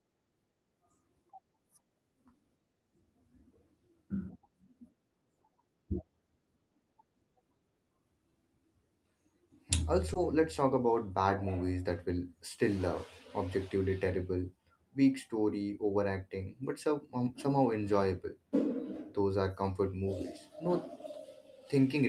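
A speech clip with a brief smear at about 10.13 to 10.17 s, where the sound wobbles for an instant and then settles back. This is short concealed packet loss: roughly 20 ms of the call arrived too late for the decoder, so the receiver improvised that gap by extending the preceding sound and then crossfaded into the real audio again. The call path's Opus coding shows as a top end limited to about 12 kHz.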